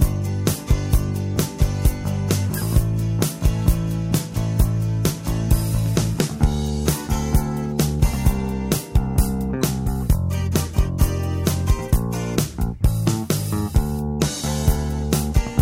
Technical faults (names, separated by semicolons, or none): none